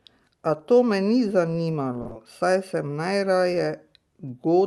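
A short stall from a late packet comes first, from 2.01 to 2.07 s, just before "saj sem najraje". A packet missed its playout time and the jitter buffer ran dry, so the receiver held the last bit of speech for about 40 ms until the data arrived, then resumed where it left off. Nothing is lost, but that sound is drawn out, with a slight buzz or dip, and everything after it plays about 40 ms later.

A short concealed packet loss follows straight on, from 2.07 to 2.13 s, again right before "saj sem najraje". This time about 40 ms of audio never reached the decoder in time. The receiver covered the gap by extending the preceding sound, using its pitch if it was voiced or shaped noise if not, and then blended back into the real signal. The result is a brief smear or wobble, and any short consonant in that gap can disappear. Through both events the high end tops out around 12 kHz, which fits an Opus super-wideband call codec.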